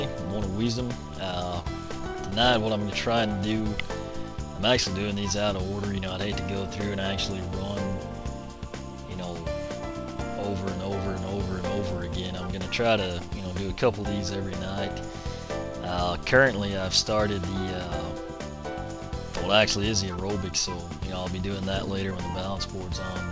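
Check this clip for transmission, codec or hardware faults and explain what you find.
Two kinds of transmission fault show up here, both from the network side of a call. The audio stops at 8 kHz, which fits a wideband call codec such as G.722.

Scattered short gaps, 1.31 to 2.34 s: a handful of packets went missing or arrived late, and the receiver filled each tiny hole by stretching out the last bit of sound. The holes are very short, so you get little ticks and smeared hiccups rather than dropouts.

Jitter buffer speed-up, 19.66 to 20.18 s and again at 21.60 to 22.12 s: the buffer had built up extra audio, so the receiver trimmed out short pitch-period chunks, about 40 ms each time. Playback runs at 106% with unchanged pitch, so both stretches sound slightly rushed.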